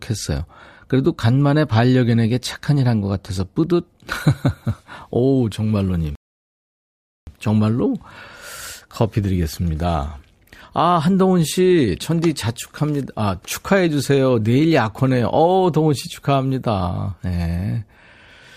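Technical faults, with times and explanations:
6.15 to 7.27 s, rebuffering stall: the speech halts abruptly and drops into silence for about 1.1 s, then picks up from exactly the point where it broke off. The player exhausted its downloaded audio and waited for more data before continuing. Unlike a dropout or packet loss, no audio is skipped or replaced. The sound simply pauses and resumes intact, so the clip runs longer by the length of the gap.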